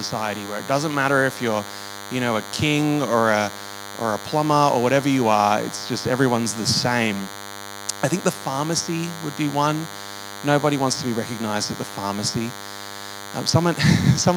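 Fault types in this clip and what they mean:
DECT cordless phone buzz: a nearby DECT handset or base radiates bursts at 100 Hz that the audio circuitry rectifies, leaving a thin, harmonic-rich buzz throughout, roughly 15 dB below the signal.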